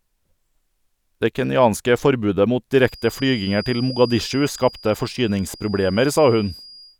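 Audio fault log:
2.75 s to the end, feedback whistle: a thin, steady tone at 4.8 kHz comes in under the speech and just sits there, roughly 20 dB below it, wobbling a bit in level but never building up. That's most likely the speaker-to-mic loop hovering right at the edge of feedback, so one frequency keeps ringing without tipping into a full howl. It holds on to the clip's last moment.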